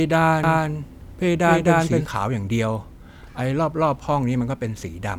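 A doubled audio track runs from 0.44 to 2.06 s in this speech clip: a second full-band copy, about as loud as the original, trails it by roughly 300 ms with no decay or room colour, then cuts off abruptly, likely from a slower second capture path.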